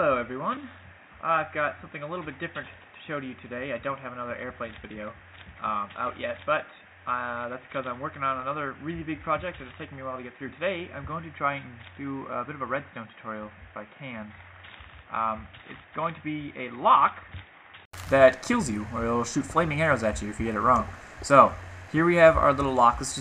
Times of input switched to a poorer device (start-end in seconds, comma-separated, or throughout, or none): 0.00-17.93